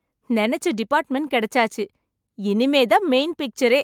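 Nothing goes wrong anywhere in this short stretch of speech, so there's no fault to point to at any moment.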